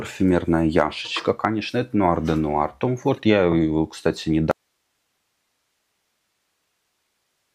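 Damaged data in the compressed stream around 3.17 to 3.20 s throws the decoder off its frame sync, producing a brief glitch. From 4.51 s to the end, an audio dropout to a faint residue follows what is likely a loss of the source signal while the downstream path stayed live, so the sound cuts off abruptly and leaves only hiss roughly 50 dB below the previous level.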